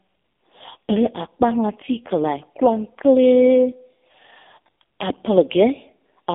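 Channel delay (comb filtering) runs through the whole clip. One channel arrives a fraction of a millisecond behind the other, and when the two are folded to mono, the components they share cancel at regularly spaced frequencies. The first deep notch sits roughly around 1.5 kHz, which scoops out part of the presence region of the speech and leaves it hollow and slightly phasey, with a colouration that stays fixed.

The AMR narrowband mobile codec is also present from start to finish, and its damage is heavy. The speech is squeezed into a telephone band of about 250 Hz to 3.6 kHz, and nothing above 3.7 kHz survives, so sibilants and air are gone and the low end is thin. The coarse pulse-driven vocal-tract model makes the voice buzzy and synthetic, which fits the codec's low 5.15 kbps mode.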